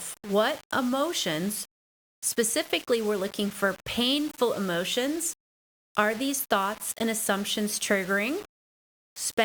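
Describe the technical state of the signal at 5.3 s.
At 5.3 s the speech is grainy and gritty, with noise about 20 dB down tracking the signal, likely low bit depth without dither, around 5 bits rounded, present throughout.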